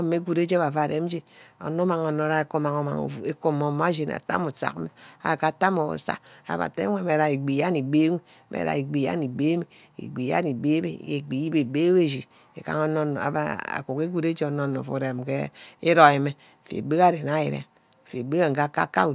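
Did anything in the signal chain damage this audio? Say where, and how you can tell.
No, nothing in the signal chain damaged this audio.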